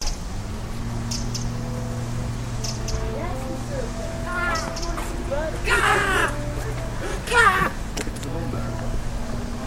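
No technical faults can be heard anywhere in this recording of sounds. There is nothing in it to mark with a time or trace to a cause.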